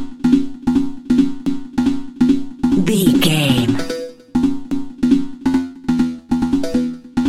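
At 1.46 s and again at 4.71 s, overlapping chunks cause a 250 ms stretch of audio to repeat, each join sounding as a brief stutter. Consecutive 3.0 s chunks begin before the previous one finishes, so the overlap region plays twice.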